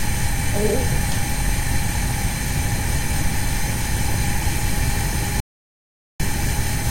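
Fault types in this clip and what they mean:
Audio dropout to silence: from 5.40 to 6.20 s the sound drops to total silence with no room tone, likely a lost input while recording continued.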